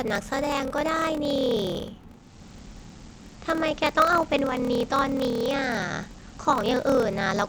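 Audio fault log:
throughout: block size mismatch (padded). A 38.3 Hz buzz from zero-filled gaps in each block, which fits 1024-sample writes into larger reads; speech runs 0.889 times speed, timbre unchanged.
2.06 to 7.49 s: digital radio blending to analogue. A 396 ms cross-fade to FM brings hiss around 30 dB down, with level unchanged.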